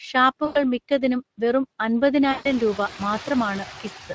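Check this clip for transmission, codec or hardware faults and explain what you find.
Three faults are present: two that run through the whole clip and a third that strikes twice.

Noise suppressor artifacts run throughout. The background dips in the gaps and swells back under the speech. The suppressor cuts what it judges to be steady noise by about 6 dB per band, frame by frame. The effect is easier to hear after roughly 2.5 s, when the room noise rises.

Speex codec damage is plainly audible across the whole clip. The speech sounds grainy and hoarse. This CELP codec spends too few bits modelling the excitation, so fine detail turns to noise. The sound fits a middle setting of about 20 kbps.

VoIP packet loss concealed by the speech codec occurs at 0.45–0.64 s and 2.31–2.48 s. Each time, the sound smears into a buzzy tone or coloured noise that fades. The decoder extrapolates its last pitch and filter over gaps of about 100 ms and 140 ms, and the output stays weak briefly after real audio returns.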